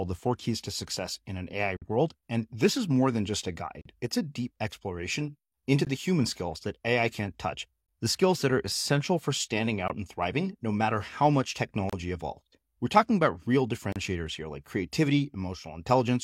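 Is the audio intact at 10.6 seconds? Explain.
Yes, at 10.6 seconds the speech runs on intact, with no dropout, click, distortion or other technical fault to be heard at that moment.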